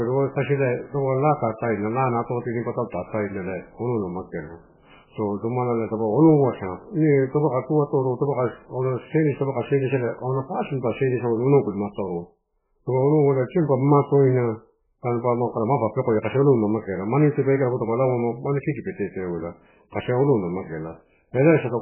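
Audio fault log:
Throughout, MP3 compression (likely cause): the speech is cut off hard at 3 kHz with nothing above, and the heavy damage fits a very low bitrate near 8 kbps. With bits that scarce, weak frequency lines are zeroed and flicker on and off from frame to frame, giving a watery, swirling texture and smeared onsets. On a spectrogram there is a flat ceiling at 3 kHz and patchy, blocky energy with holes below it. The waveform's attacks look softened.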